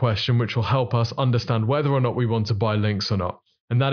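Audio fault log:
No faults are heard in this speech recording. Nothing in it calls for an entry in this log.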